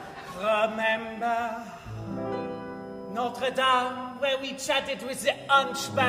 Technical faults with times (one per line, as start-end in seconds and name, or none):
0.00-6.09 switching supply whistle